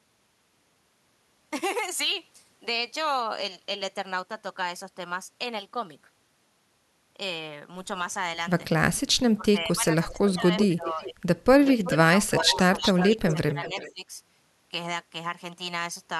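From 9.36 to 11.26 s the speech dips by up to about 20 dB, for roughly one and a half seconds in all. This is speech suppressed in double talk. Both sides were likely talking at once, so the echo canceller turned the near talker down too.

Inside that stretch, an echo leak appears from 10.09 to 10.67 s and again from 10.99 to 11.03 s. A copy of the speech returns 374 ms late. It sits at about 10 dB below the speech, then about 30 dB below. The likely cause is a loudspeaker echo the canceller failed to remove.

From 11.63 to 14.11 s the suppression returns, with dips of up to about 15 dB. The echo leaks again from 11.66 to 11.92 s, at about 15 dB down, and from 12.40 to 13.93 s, at about 10 dB down. The delay is still 374 ms.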